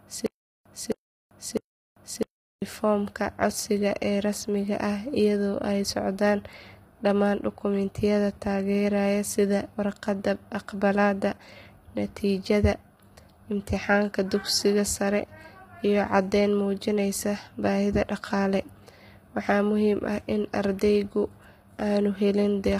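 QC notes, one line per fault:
0.00–2.62 s: stutter with silent gaps. Already under way at the start, a 0.26 s burst repeats three times, each followed by 0.39 s of digital silence. A stalled stream is the likely cause.
Throughout: low-delay AAC compression. The sound is rough and grainy, with noise between harmonics and a synthetic top band. This fits heavily compressed AAC-ELD near 24 kbps.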